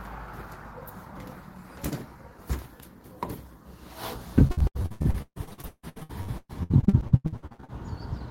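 From 4.47 s to 7.70 s the audio breaks up with repeated packet loss, giving a robotic sound: 34 separate gaps, the longest 156 ms, with about half of that stretch patched by concealment that stretches the last good sound forward. The result is choppy and robotic, with held fragments. On a spectrogram the span shows smeared, frozen horizontal bands alternating with breaks; the waveform looks repetitive and chopped rather than continuous.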